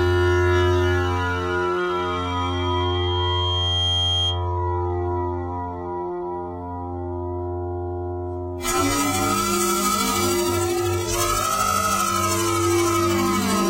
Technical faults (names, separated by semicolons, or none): loudspeaker feedback squeal